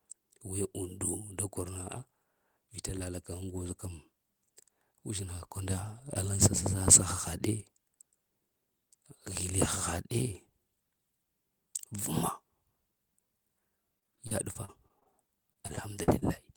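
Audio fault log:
13.99–15.07 s: repeated packet loss (robotic sound). Gaps of up to 42 ms are repeatedly filled by stretching the preceding sound, covering about 20% of the stretch, so the speech turns choppy.
15.53–16.24 s: repeated packet loss (robotic sound) again. Gaps of up to 40 ms are patched by continuing the last sound, covering about 17% of the span, so the speech stutters.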